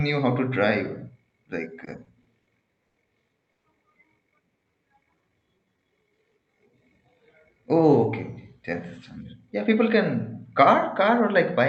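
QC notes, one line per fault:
1.85–3.66 s, repeated stalls (stutter): the sound catches and drags in six short hitches, the longest about 110 ms, with around 290 ms of stretched filler in all and nothing lost. Packets arrived late, the jitter buffer kept running dry, and the receiver extended the last sound to cover each gap.
4.56–6.17 s, jitter buffer slow-down: delivery turns sluggish and drawn out at an unchanged pitch, running at 88% speed and adding about 204 ms. With its reserve running low, the buffer repeated single pitch periods and slivers of pauses over and over to rebuild it.
8.00–11.61 s, jitter buffer speed-up: the closing stretch runs slightly faster at 103% speed, pitch intact, with roughly a tenth of a second trimmed away. The buffer held more audio than its target, so it shaved out short pitch-period-sized pieces repeatedly to pull the delay back down.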